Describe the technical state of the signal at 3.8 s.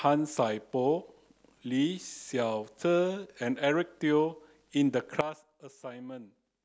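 At 3.8 s the speech runs intact, with no dropout, click, distortion or other audible fault at that point.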